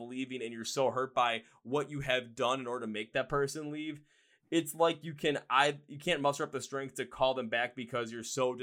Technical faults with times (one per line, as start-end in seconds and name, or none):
none